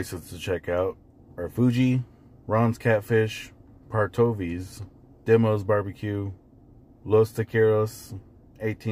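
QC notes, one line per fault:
Throughout: crude rate conversion, linear interpolation fits 32 kHz to 44.1 kHz; inharmonic fizz about 35 dB down tracks loud, bright passages, showing as faint spurious spectrogram lines.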